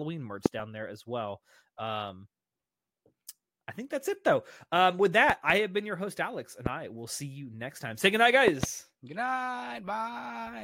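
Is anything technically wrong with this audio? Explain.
Yes, there are loud pops at 0.46–0.48 s, 5.30–5.52 s (a double), 6.66–6.69 s and 8.48–8.66 s (a double). Each is a sharp thump, roughly 15 to 20 dB above the speech, which continues underneath. A likely voltage step, from a switch, plug or static, jolts the signal. On a waveform each shows as a tall spike, and on a spectrogram as a thin full-band vertical line.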